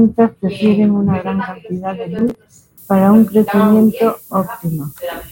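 From 2.19 to 2.61 s, processor overload crackle tears through the speech. Around twenty short buffers, each about 1.5 ms, are skipped, leaving hard-edged gaps.

From 2.78 s to the end, low bit depth with noise shaping appears. Seven-bit rounding adds a thin, top-heavy hiss, roughly 20 dB below the speech.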